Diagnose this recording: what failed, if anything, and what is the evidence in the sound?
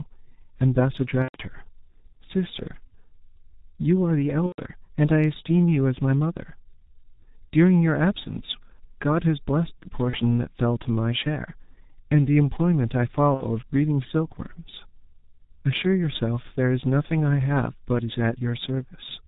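The codec stage failed throughout. The speech is band-limited with nothing above 4 kHz, sounds muffled and hoarse, and its consonants are smeared. That fits G.723.1 in its 6.3 kbit/s mode. Its 30 ms frames and slowly updated vocal-tract model cannot follow quick articulation, so transitions blur into one another. This differs from a plain low-pass filter, which would leave the consonants crisp, and from a bandwidth-only narrowband channel: here there is also rough, hoarse colouring that comes from very low-rate parametric coding.

The network stage dropped packets at four points: 1.22–1.38 s, 4.47–4.60 s, 10.10–10.17 s and 13.34–13.44 s. At each one the sound is stretched out and fades. This is VoIP packet loss concealed by the speech codec. The decoder repeats its last pitch and filter while lowering the gain, and it stays weakened briefly after packets resume. The lengths fit losses of one to four 30 ms frames. 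A plain dropout would be silent or clicky, not a sustained, decaying sound.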